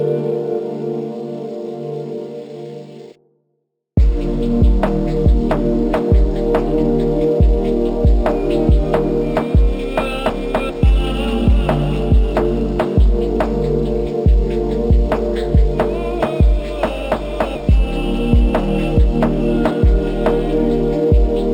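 Imaging from linear upsampling runs through the whole clip. The rate was raised by joining samples with straight lines, which fits a 12 kHz original converted to 48 kHz. That simple interpolation filters poorly. The top of the original band is dulled. A mirrored copy of the spectrum survives between 6 kHz and 12 kHz, roughly 40 dB below the signal. It adds a faint metallic shimmer on the brightest parts of the sound.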